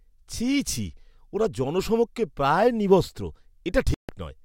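At 3.94 s the speech cuts abruptly to silence and resumes at 4.09 s, a gap of about 146 ms. This is a Bluetooth stall, likely caused by radio interference delaying packets until the headphone buffer emptied and playback waited for retransmissions. Unlike a packet-loss dropout, where concealment smears or repeats audio and the missing stretch is gone, here the sound goes fully silent and then carries on from where it paused or slightly later.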